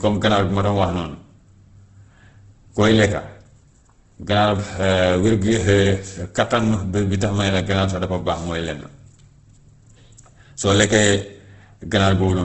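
Throughout, the speech sounds grainy and rough, with nothing above 8.2 kHz. This is likely heavy Opus compression, filling starved bands with noise, which fits a 12 kbps stream.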